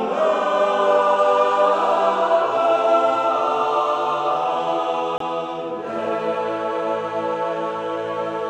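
At 5.18 s the sound drops to silence for 23 ms, a short hole, and returns at 5.21 s as if it had kept playing. The likely cause is a Bluetooth dropout: a late packet was discarded, a gap that fits a single lost frame.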